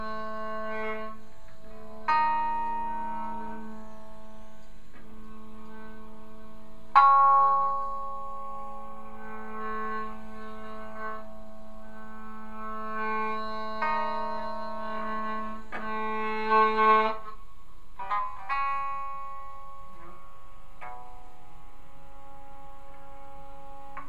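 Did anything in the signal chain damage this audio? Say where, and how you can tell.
No, nothing in the signal chain damaged this audio. No stage, from the wiring and converter through to storage and playback, leaves any audible trace of trouble.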